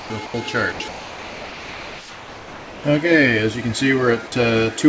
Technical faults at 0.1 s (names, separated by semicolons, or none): sound dropped by the voice detector